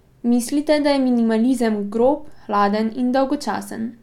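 No technical faults can be heard anywhere in the speech.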